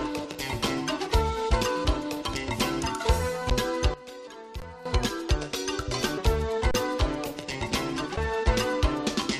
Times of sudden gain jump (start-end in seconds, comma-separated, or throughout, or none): 3.94-4.85